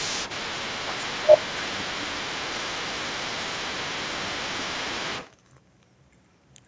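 From 0.0 to 5.31 s a second, fainter voice runs underneath the main talker, sitting roughly 15 dB below the speech. This is the other side's voice leaking through. The far end was most likely playing on the talker's loudspeaker and reaching the microphone, with the echo canceller failing to strip it out, so that conversation bleeds into this side's audio for most of the opening five seconds.

Within that stretch the main voice sags three times while the leaked voice is present. There is a brief dip of about 10 dB at 0.90 to 1.02 s, lasting barely a tenth of a second. A deeper, longer drop of around 15 dB follows from 1.18 to 2.39 s. Another dip of about 10 dB runs from 3.75 to 5.12 s, each of the longer two covering roughly a second in total. This is speech suppressed in double talk. Likely the canceller could not separate the wanted talker from the echo while both were active, so it pulled the whole signal down. 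The speech band reaches up to 8 kHz throughout, from the call's microphone processing.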